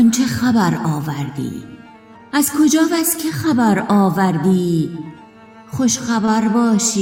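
A short concealed packet loss occurs at 6.25 to 6.29 s. About 20 ms of audio never arrived in time. The decoder filled that gap by extending the preceding sound, then blended back. The result is a brief smear or wobble.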